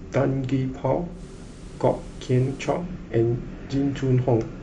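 At 1.10 s the speech undergoes digital radio blending to analogue. The receiver loses its digital stream and cross-fades over about 138 ms to the FM broadcast, bringing hiss roughly 30 dB below the signal with no level change, then returns at 2.84 s. A smooth fade into steady hiss, rather than an abrupt gap, separates this from a dropout.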